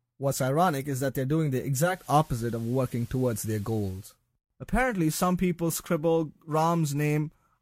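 From 1.75 to 4.19 s the speech goes through a digital radio blending to analogue: the receiver loses the digital stream and cross-fades over about 0.3 s to the FM signal. You get hiss roughly 30 dB down and a level shift of about 2 dB, then it blends back.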